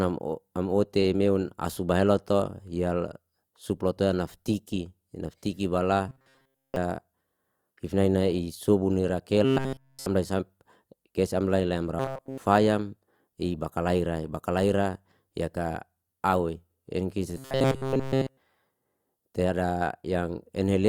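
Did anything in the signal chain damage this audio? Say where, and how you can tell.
Yes, there's robotic sound from repeated short buffers in four stretches: 6.09 to 6.76 s, 9.45 to 10.06 s, 11.99 to 12.38 s and 17.37 to 18.38 s. The speech collapses into a stiff metallic buzz locked at 133 Hz, fully in the last three and mostly in the first. That fixed pitch points to a buffer of about 7.5 ms being looped, likely because audio reached the driver or buffer stage too slowly and the last block was replayed.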